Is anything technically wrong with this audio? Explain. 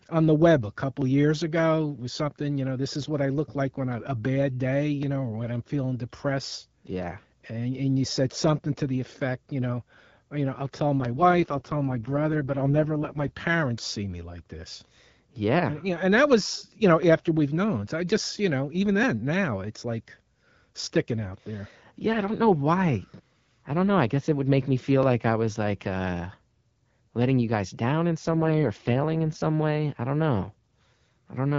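Yes. There are two faults: a regular ticking from short dropouts, and two spells where the speech coding coarsens.

Periodic USB or driver dropouts begin at 1.02 s, just after "on the web a". They recur every 2.0 s until 31.04 s, about fifteen in all. Each time, something blocks the audio path and around a millisecond of audio is skipped outright rather than filled. The splice sounds like a small tick. Unlike network packet loss, which strikes at irregular moments, these ticks keep strict clockwork spacing and are heard only while speech is sounding.

An AMR rate drop runs from 11.0 to 13.32 s and again from 28.29 to 29.42 s. In these spans the voice turns rough, buzzy and more synthetic, which fits the AMR-WB codec being pushed from 12.65 down to 6.6 kbit/s, as a network does when the radio link weakens and bits are shifted to error protection. Unlike a bandwidth fallback, the speech keeps its full wideband brightness and there is no gap. 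Only the texture degrades, and it recovers once the rate returns.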